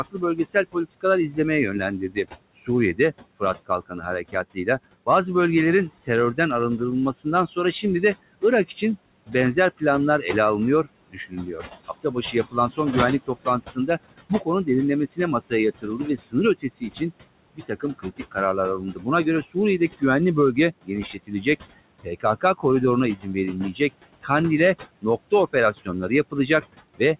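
It's a speech recording that's been through a call, and the big issue is noise suppressor artifacts running the whole way through. The suppressor pulls the steady room noise down by about 21 dB, so the background drops away in the gaps and creeps back up under the talking as the gain shifts frame by frame. The room noise was already sitting about 16 dB under the speech before the suppressor got to it.

The second problem is speech cut by the noise suppressor. It mistakes bits of the talker for noise, so soft consonants and word tails get swallowed. You can hear it at 0.11–1.38 s, 1.99–5.07 s, 6.07–9.82 s, 10.84–24.3 s and 25.02–27.19 s, with drops as deep as about 18 to 21 dB. The 10.84–24.3 s stretch is the worst, with roughly three seconds of speech dimmed across it, and each of the first two spans loses around half a second.

There's also nothing above 4 kHz, which fits a narrowband 64 kbps G.711 mu-law call leg.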